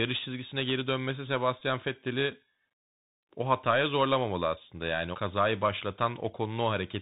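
Bluetooth CVSD headset codec damage runs through the whole of this speech recording. The one-bit, step-adaptive coding, which fits a 64 kbit/s link, strips everything above 4 kHz, lays a grainy hiss underneath, roughens sibilants and distorts loud bright sounds. A Bluetooth headset packet repeated fault occurs at 1.60 s. Lost audio was refilled by replaying previous packet data for about 11.2 ms, which fits roughly three 3.75 ms packets, and is heard as a brief buzzy tick.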